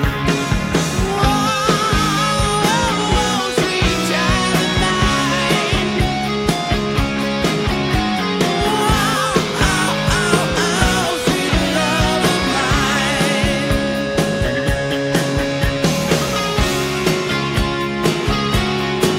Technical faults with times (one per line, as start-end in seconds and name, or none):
none